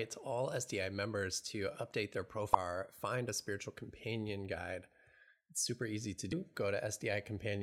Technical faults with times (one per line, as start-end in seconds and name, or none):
2.53 damaged data in a compressed stream
6.32 damaged data in a compressed stream